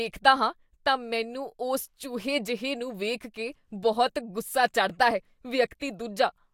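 Listening to the speech recording, nothing stood out as a technical problem at any point.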